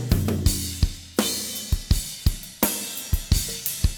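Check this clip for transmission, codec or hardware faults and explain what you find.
Nothing in the clip points to a transmission, codec or hardware fault. There is no dropout, distortion or other defect to describe.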